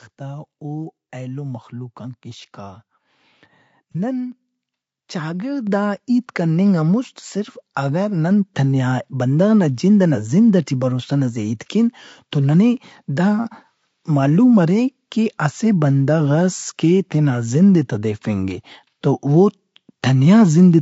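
Throughout, the speech sounds rough and grainy, with noise between harmonics and a synthetic top band, likely from low-delay AAC compression (AAC-ELD) at a bitrate around 32 kbps. At 3.93 to 3.96 s, AAC frame loss with concealment leaves a 30 ms smeared, noisy patch where the decoder filled the gap from the previous spectrum, which fits one lost frame. The microphone volume is stepped up four times, with voice and background jumping together: by about 5 dB at 4.32 s and again at 5.67 s, by about 2 dB at 8.31 s just after "صرف اگہ", and by about 1 dB at 11.91 s between "ہیت کین" and "توننے دا".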